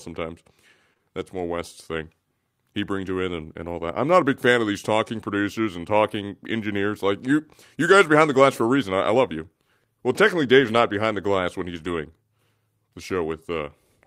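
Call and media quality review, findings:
Short concealed packet loss, 0.93–1.01 s: brief smear where the jitter buffer/decoder extended the preceding sound across two consecutive gaps of about 20 ms each, then blended back.

Lost packet rebuilt from error correction, 10.61–10.83 s, 11.77–11.91 s, 13.09–13.11 s: no gaps but rougher, noisier stretches, where the decoder played low-bitrate Opus FEC copies in place of missing packets.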